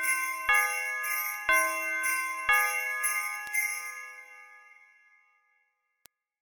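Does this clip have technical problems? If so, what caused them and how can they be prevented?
Yes, there are three bit error spikes, at 1.34 s (about -25 dBFS), 3.47 s and 6.06 s (both about -19 dBFS). In each, one or two samples take a wrong value, a jump by a power of two, and return at once. This produces a single broadband tick that is unrelated to the surrounding audio. A buffer dropout click comes with a gap or a repeated section, and these ticks have neither. Error-checked links and ECC memory would prevent them.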